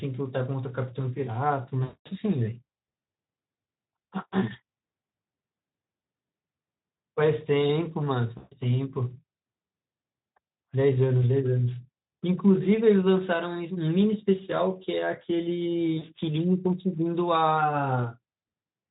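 At 1.83 s the speech breaks up for about 0.27 s, ending near 2.10 s. This is VoIP packet loss concealed by the speech codec. The decoder repeats its last pitch and filter while the gain drops, so the voice smears into a buzzy, fading tone. The gap fits about 220 ms of lost 20 ms frames. Shorter drops follow at 8.37–8.56 s and 15.97–16.12 s. The underlying Speex coding sounds only lightly coloured.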